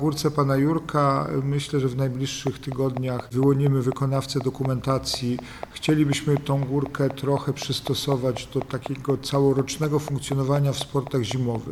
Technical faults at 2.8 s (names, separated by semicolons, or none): train of clicks